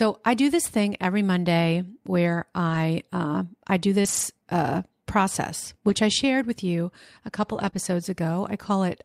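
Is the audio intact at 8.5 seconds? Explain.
Yes, the audio is intact at 8.5 seconds, with no audible fault at that point.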